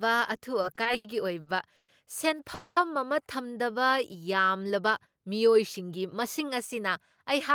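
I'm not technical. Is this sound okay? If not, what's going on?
No. The audio has three separate problems, all of the kind you get on an internet call when the data carrying the sound doesn't arrive on time.

From 0.61 to 1.91 s there are repeated stalls (stutter). The sound catches six times, adding about 310 ms in total, which is roughly a quarter of that stretch. The longest catch is 120 ms. Each time, the receiver ran out of incoming audio and stretched the last bit of sound to fill the wait. Nothing is lost, but the speech drags and sounds jerky.

From 2.54 to 2.79 s there is a call audio freeze. The sound holds for about 220 ms, carried by a smeared continuation of whatever was playing just before, with no true silence. Then it picks up exactly where it left off. The likely cause is a batch of audio data held up in transit. No speech is missing, but everything after this point runs 220 ms later than before.

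From 5.56 s to the end, at 7.54 s, a jitter buffer speed-up is at work. The receiver had built up more stored audio than it wants, so it trimmed many tiny slices out of the sound to catch up, about a tenth of a second in all. The speech plays at 105% speed with its pitch unchanged, so it comes across as slightly hurried rather than higher.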